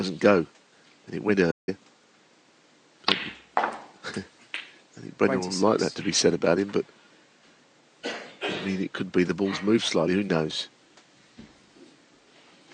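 At 1.51 s there is a playback stall: the player most likely ran short of data or had its thread blocked, so output halted for about 165 ms. The sound cuts to silence mid-flow, then resumes around 1.69 s.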